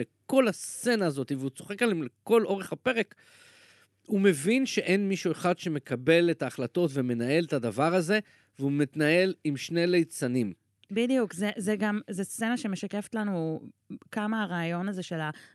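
Nothing stood out on listening to this speech clip, which carries the ordinary character of an Opus call path with its top end rolled off around 12 kHz.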